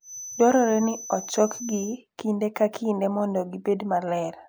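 From the start to 2.0 s, a thin, steady whistle at 6 kHz sits behind the speech, swelling and fading slowly and about 15 dB below it. This feedback whistle is likely a loudspeaker-to-microphone loop held just at the edge of ringing, sustaining one tone.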